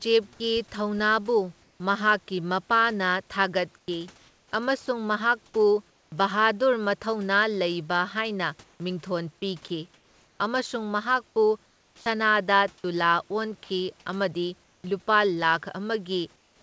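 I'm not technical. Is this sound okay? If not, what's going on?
No. Between 3.78 and 6.12 seconds the speech sounds choppy: bits keep vanishing, about three quarters of a second lost in all. This is sound chopped by the voice detector. The calling system likely kept switching between sending and not sending because it judged quieter parts as silence.

At 9.68 seconds, and again from 13.64 to 13.70 seconds, a tiny piece of speech disappears and artificial filler noise plays in its place. This is sound dropped by the voice detector. The system likely mistook that quiet moment for background noise and briefly stopped sending.

In the pauses from 9.68 to 10.40, 11.66 to 12.06, 14.64 to 14.84, and 16.36 seconds to the end, the room's natural background gives way to a flat, even hiss, noticeably quieter around 11.7 seconds. This is comfort noise in place of the background. The system likely stopped sending during silence, and the listener's end filled the gap with artificial noise.

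From 11.95 to 12.06 seconds, the speech that follows starts abruptly, missing about a tenth of a second at its beginning. This is an onset clipped by the voice detector. The system was likely slow to notice that talking had resumed, so the start never arrived.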